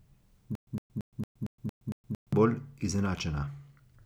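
From 0.55 to 2.33 s the speech breaks into a stutter with silent gaps: one 110 ms fragment repeats eight times with 119 ms of digital silence between, a 228 ms cycle. A stalled stream retrying is the likely cause. The waveform shows identical blocks separated by flat silent stretches, and the spectrogram shows matching vertical slices with blank columns between.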